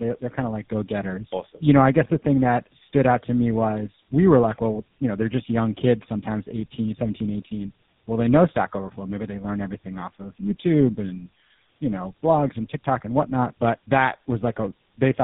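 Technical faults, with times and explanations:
Throughout: tandem speech coding. The speech passed through AMR-NB at 7.95 kbit/s, then a G.711 A-law link, then GSM full rate at 13 kbit/s. The GSM coder re-encoded the AMR-NB coder's distortion, compounding roughness and warble, with nothing above 3.8 kHz.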